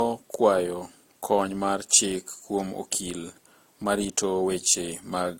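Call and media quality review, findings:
Speech carries the artefacts of two codecs heard together for the whole clip, with nothing above about 16.6 kHz. Likely transcoding between lossy codecs, consistent with an Opus stage re-encoded to AAC-LC, the second encoder spending bits on the first one's artefacts and layering its own on top.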